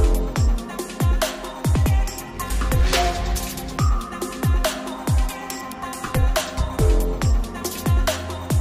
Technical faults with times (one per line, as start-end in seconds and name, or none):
none